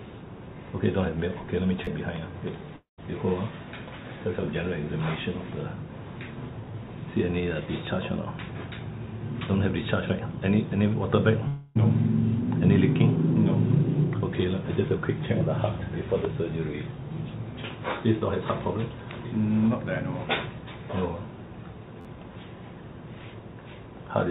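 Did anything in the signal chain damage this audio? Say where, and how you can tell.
Yes. A repeated buffer fault at the driver/buffer stage: audio missed its deadline, so the last block replayed. At 1.85 to 1.87 s one short piece sounds three times with hard joins, and at 22.01 to 22.05 s four times. Each block lasts 11.61 ms, which fits a 512-sample buffer. Roughly 20 ms and 40 ms of real audio are lost.

A long network dropout, likely from packets never arriving. From 2.76 to 3.00 s about 220 ms is missing: a buzzy continuation of the last sound fades, then near-silence. From 11.48 to 11.77 s about 280 ms is gone, covered entirely by a decaying fill before the sound resumes further on.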